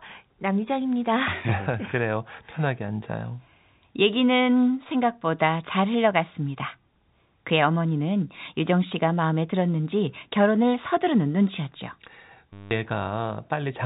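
From 12.53 to 12.71 s, about 180 ms of packet loss with the last packet repeated: the receiver replays one short chunk, giving a robotic stutter that buzzes near 100 Hz, which fits 10 ms packets. The waveform shows an identical repeating block over the narrowband G.711 audio.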